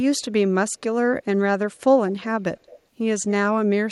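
From 2.08 to 2.25 s and again from 2.58 to 2.79 s, a faint echo leak appears: a delayed copy of the speech about 215 ms late and well below it, likely a loudspeaker echo that a far-end echo canceller missed. Unlike room reverb, it is a distinct repeat rather than a smooth tail.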